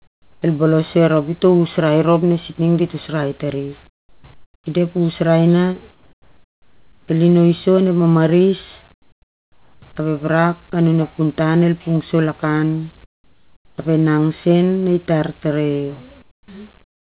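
Speech carried over a call line that, from its empty band above 4 kHz, fits narrowband G.711, with comfort noise in place of the background in the pauses at 0–0.42, 3.88–4.24, 4.34–4.66, 5.92–7.08, 8.92–9.82, 13.04–13.78, 16.22–16.48 and 16.82–17.0 s. The real room tone gives way to a flat, featureless hiss about 10 to 18 dB quieter, likely because the sender stopped transmitting in silence and the receiver synthesised filler. A spectrogram shows smooth, uniform grey blocks with abrupt level steps at each edge.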